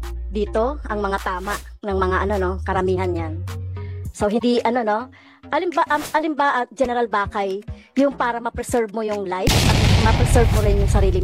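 At 4.35 s, for about 80 ms until 4.43 s, damaged data in the compressed stream causes a short chirp or blip. Corrupted bytes make the decoder misread those frames and lose sync, so it produces garbage briefly while hunting for the next valid frame header.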